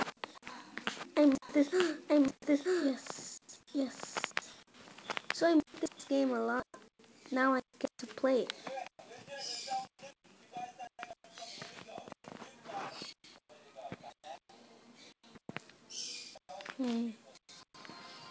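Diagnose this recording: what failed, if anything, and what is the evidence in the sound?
From the start of the clip until 6.08 s, everything is heard twice: a second full-band copy at roughly the same loudness trails the first by about a second, with no reverberant tail or room colour, and it stops abruptly at 6.08 s. This is a doubled audio track at the capture or mixing stage, likely from the same signal being recorded again through a slower path or an edit holding two copies out of step.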